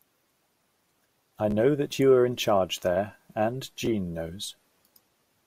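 Bluetooth stutter at 1.51 to 1.54 s and 3.86 s: late packets were replaced by a replayed slice, a brief stutter. The waveform shows short identical repeating segments, and the spectrogram shows vertical striping.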